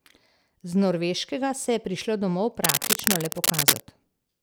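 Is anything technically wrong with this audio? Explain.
Yes. From 2.64 to 3.82 s the speech carries cable scratch noise: dense, irregular crackling and rustling at roughly the same level as the voice. This likely comes from a worn cable or connector being moved, its contact resistance fluctuating rapidly and injecting noise bursts.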